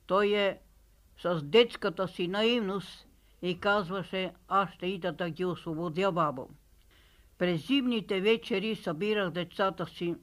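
No technical faults are audible.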